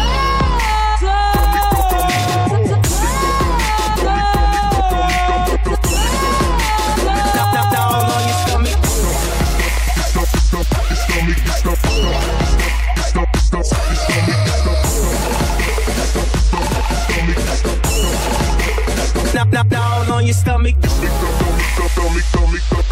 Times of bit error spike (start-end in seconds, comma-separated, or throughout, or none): 20.75